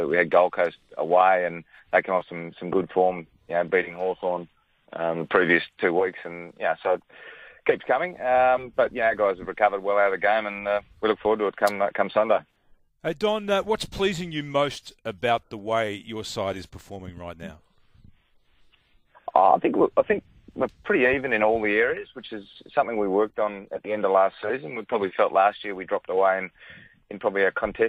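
Nothing technically wrong turns up anywhere in this audio, so there's no problem here to point to or explain.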